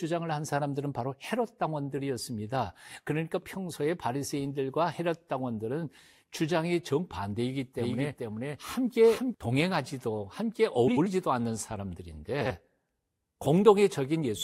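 Doubled audio track, 7.78 to 9.34 s: a second full-band copy of the speech runs roughly 0.4 s behind, at about the same level, with no decay or room colour. It starts and stops abruptly, likely from a slower second capture path mixed in.

Frames out of order at 10.87 to 11.07 s and 12.40 to 12.51 s: each stretch plays with its two halves swapped, about 93 ms and 46 ms blocks respectively. This produces a brief garbled flutter, and no time is lost.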